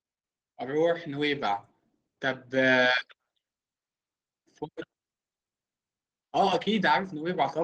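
From 0.64 s to 1.53 s the automatic gain is rising: the gain control judged the input too quiet and raised its gain by about 4 dB over that span, so the speech and the room noise behind it swell together. On a waveform the envelope widens steadily across that stretch, noise floor included, and a spectrogram shows every band brightening evenly, all heard through the call codec's coding noise with nothing above 12 kHz.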